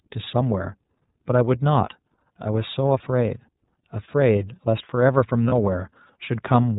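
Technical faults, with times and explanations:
Throughout: iLBC codec. The sound is cut off above 4 kHz and plainly rough and synthetic, as each 30 ms frame is coded alone, which fits the 13.33 kbps mode.
5.48 to 5.53 s: lost iLBC frames. A brief buzzy, held vowel fills about 30 ms, fitting one dropped frame, as the decoder repeats the last pitch cycle with noise before recovering.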